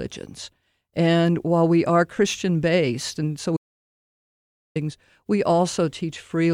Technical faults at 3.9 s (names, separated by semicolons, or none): audio dropout to silence